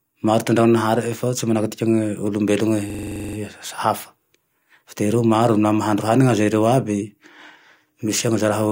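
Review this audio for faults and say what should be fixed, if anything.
System hang loop, 2.90 to 3.37 s: one 42.7 ms slice of speech repeats eleven times at 23.4 Hz, a rattling stutter that fits a 2048-sample ring buffer replayed while the system froze. To prevent it, keep the audio thread from stalling and have the driver output silence, not stale buffer contents, when a refill is missed.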